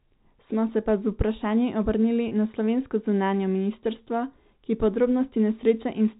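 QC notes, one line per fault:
2.28–2.31 s, packet loss with pitch repetition: between "pa z vprašanji obrnili" and "na slovensko zunanje ministrstvo", about 30 ms of audio drops out, consistent with a single lost packet. The receiver repeats the last pitch period to fill the gap, which sounds like a brief, slightly held buzz.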